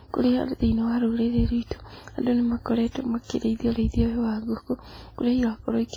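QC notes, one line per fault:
Throughout, WMA compression: the speech rings and smears, with a washy hiss that swells and fades with the signal instead of sitting steady underneath. That's heavy damage from a transform codec, most likely a WMA encode. Long blocks spread quantisation noise across tens of milliseconds around each sound, and the weaker spectral detail has been zeroed out. That points to a low bitrate, something in the region of 24 kbps.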